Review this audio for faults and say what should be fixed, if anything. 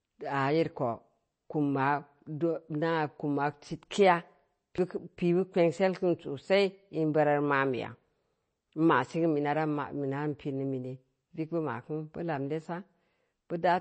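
The speech sounds watery and swirly, with nothing above 8.3 kHz. This is likely MP3 compression, and it fits a 32 kbps encode. Encode at a higher bitrate or keep a lossless master.

At 4.78 s there is a CD skip. The sound gives a tick, mutes very briefly, and resumes from another point on the disc. Rip with an error-correcting drive from a clean disc.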